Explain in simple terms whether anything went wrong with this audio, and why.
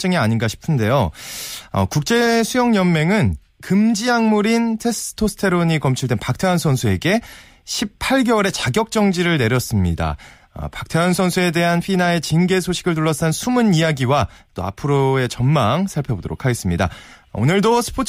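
Nothing went wrong here.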